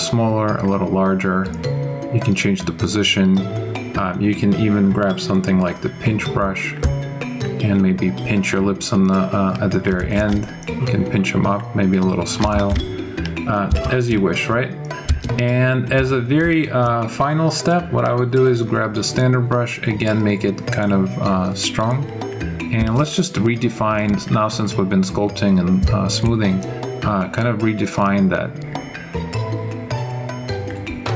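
Gain pumping runs through the whole clip, with the gain swinging by roughly 15 dB, likely from input gain set far too high with a fast limiter clamping down, squashing the dynamics, heard through call microphone processing topping out at 8 kHz.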